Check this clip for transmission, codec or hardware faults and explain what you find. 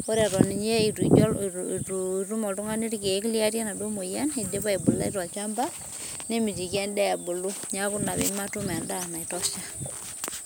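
Nothing in the speech points to a transmission, codec or hardware problem; the signal stays continuous and stable with no audible breaks, distortion or added noise.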